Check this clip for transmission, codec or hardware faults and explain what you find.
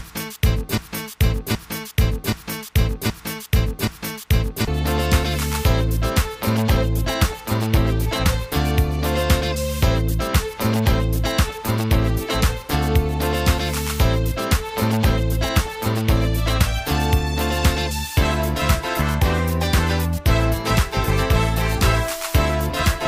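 One fault is present. A broken-record loop runs from 0.0 to 4.67 s, already under way when the clip begins. A 0.77 s fragment repeats exactly, back to back, five times, most likely because the player or stream stalled and kept resending its last buffer, so the intended audio there is lost.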